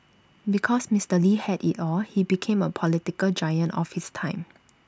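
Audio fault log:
No faults heard anywhere in this speech.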